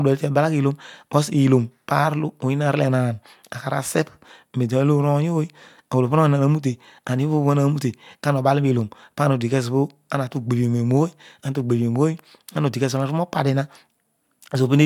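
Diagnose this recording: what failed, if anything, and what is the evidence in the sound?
Nothing failed: no stage in the chain, from capture to playback, leaves anything audible in this speech recording to diagnose.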